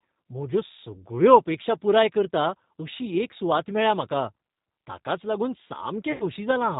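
Throughout the clip the speech carries G.729 codec damage, plainly audible and consistent with an 8 kbit/s G.729A stream. The codec rebuilds each 10 ms frame from a vocal tract filter, a pitch predictor and a handful of pulses, so the voice sounds slightly rough and synthetic. On a spectrogram, energy stops sharply at 4 kHz with nothing above it, and harmonics look smeared and patchy rather than cleanly striated.

From 6.12 to 6.24 s there is VoIP packet loss concealed by the speech codec. About 80 ms of audio went missing, which fits four lost 20 ms packets. The decoder kept extending its last pitch and filter at falling gain, so the sound is briefly stretched into a buzzy tone or coloured noise that fades. Because each frame depends on the one before, the speech stays weak for a moment after packets return. On a spectrogram this shows as a flat, repeated pattern that fades, and the waveform shows an envelope that decays steadily and then recovers slowly.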